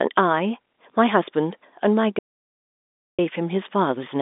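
An audio dropout to silence runs from 2.19 to 3.19 s: the speech cuts off mid-flow into silence, with no line hiss or room tone, then resumes, losing about 1.0 s. The input was likely lost while the recorder kept writing silence, beneath telephone-band sound limited to roughly 250 Hz to 3.6 kHz.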